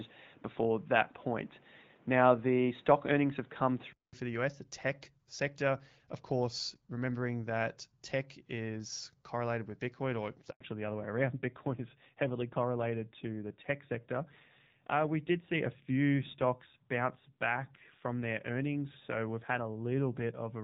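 Input switched to a poorer device, from the start to 4.13 s: the sound is boxy and dull, with nothing above 3.8 kHz, background noise roughly 35 dB down, and a level about 5 dB off, likely from a lesser microphone. A 200 ms silence precedes the clearer sound at "for the".

Handover gap at 10.51 to 10.61 s, right after "or it's": the signal fades within milliseconds and stays silent for 100 ms while the call moves between networks, so nothing spoken in that span survives.

Fallback to narrowband from 10.61 s to the end: the clean wideband sound, carried until then by AMR-WB with only light coding damage, gives way to a duller, rougher one with nothing above 4 kHz, which fits a drop to AMR-NB at around 7.4 kbit/s.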